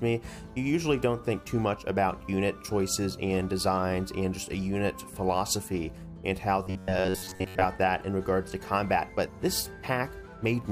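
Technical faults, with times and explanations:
6.63 to 7.65 s, robotic sound from repeated short buffers: the sound turns into a rigid metallic buzz at about 94 Hz. This is likely caused by one roughly 11 ms chunk being replayed while incoming audio stalled, so most of the real signal in that stretch is skipped.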